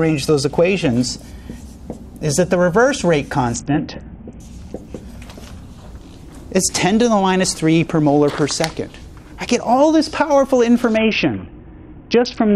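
At 3.55 to 4.40 s and again from 10.97 s to the end, a Bluetooth SBC bit pool drop strips the top sub-bands and coarsens the rest, dulling treble under gritty noise, consistent with a bit pool falling from 31 to about 6. Spectrograms show the high band vanishing abruptly.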